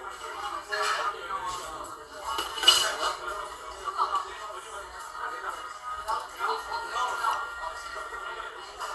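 A recording of sounds, likely passed through MP2 compression at a rate consistent with about 80 kbps, where too few bits shut off the upper sub-bands: nothing remains above 12.2 kHz, so it sounds dull, with plainly audible gurgling, granular distortion throughout.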